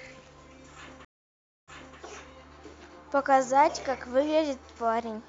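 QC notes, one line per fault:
1.05–1.98 s, stream reconnect: the speech goes silent for 0.63 s, then resumes 0.30 s earlier than where it broke off, so a short stretch repeats. The connection dropped, the player started a fresh decoder mid-stream, and the server resent already-played audio.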